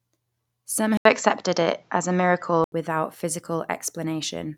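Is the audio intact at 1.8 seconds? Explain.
No. At 1.8 seconds the speech falls inside a stretch from 0.97 to 2.72 s where the input was likely switched to a poorer device. The pickup there has nothing above 7.6 kHz, so the sound turns duller and boxier, the level shifts by around 5 dB, and a faint new noise floor appears well below the speech. An 80 ms gap of silence marks the switch, and the fuller sound returns at 2.72 s.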